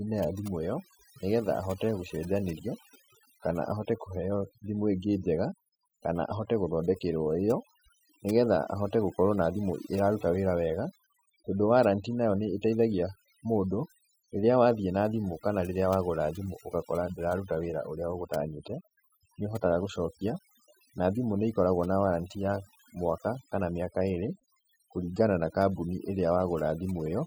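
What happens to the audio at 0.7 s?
At 0.7 s the background between sounds drops and breaks up into twinkling specks. This is overdone noise removal, present throughout the clip: an aggressive noise reducer pulls individual frequency bands down whenever they approach its noise estimate, stripping quiet parts of the voice along with the noise.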